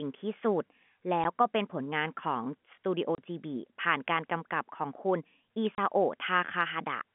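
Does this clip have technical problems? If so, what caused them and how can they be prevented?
Yes. The speech is broken by packet loss filled with silence: a brief dropout at 1.24 s lasting 10 ms, then two longer holes of 30 ms each, from 3.15 to 3.18 s and from 5.75 to 5.78 s. The receiver inserted digital silence where packets never arrived, so the signal stops abruptly and restarts. On a waveform these show as flat silent stretches with sharp vertical cut-offs. On a spectrogram they appear as narrow blank columns across the whole 150 Hz to 3.4 kHz G.711 telephone band. The 10 ms and 30 ms lengths point to 10 ms packets, with one packet lost first and then runs of three. This can be prevented with a larger jitter buffer, forward error correction or redundant packets, and packet loss concealment that fills gaps with interpolated audio instead of silence.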